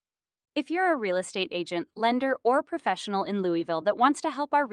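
No technical faults can be heard in this recording of speech. At no point does anything interrupt or disturb the sound, so there is nothing to locate or time.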